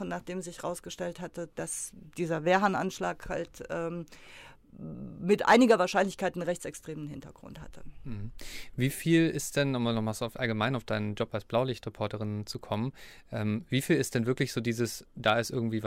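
From 5.48 to 5.71 s the speech shows hard clipping: peaks drive about 6 dB past what the stage can pass, so waveform tops are sheared flat, adding high harmonics heard as harsh crackle. A brief second clip at 15.28 s overshoots by about 3 dB, giving a short tick.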